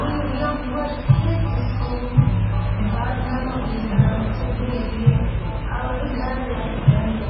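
Throughout, the audio sounds watery and swirly, with nothing above 5.5 kHz and transients smeared. This is heavy MP3 compression, likely at a very low bitrate around 16 kbps, where the encoder cuts the treble and drops weak frequency components that flicker between frames.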